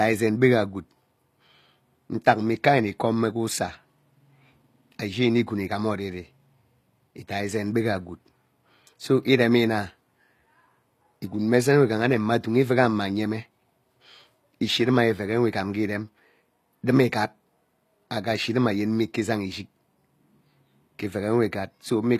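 Speech, with HE-AAC compression damage plainly audible throughout: the treble above the core band sounds synthetic, sibilants come out gritty and lispy, and nothing sits above 14.9 kHz. Copied, envelope-shaped upper bands are the likely cause, consistent with a bitrate around 24 kbps.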